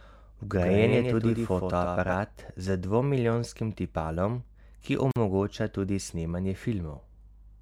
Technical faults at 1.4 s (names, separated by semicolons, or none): doubled audio track